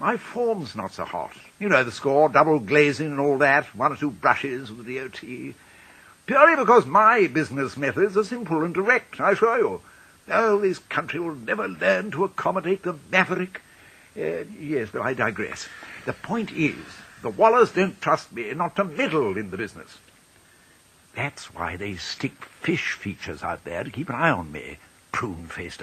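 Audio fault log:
No faults detected.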